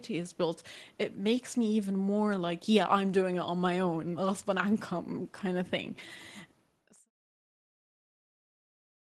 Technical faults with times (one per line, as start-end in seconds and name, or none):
none